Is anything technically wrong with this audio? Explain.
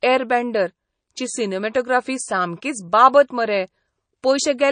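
Yes. Throughout the speech, nothing is heard above 9.4 kHz, and the sound is plainly watery and swirly. The likely cause is MP3 compression at a low bitrate, around 32 kbps. Short of bits, the encoder cut the treble and dropped weak frequency lines frame to frame.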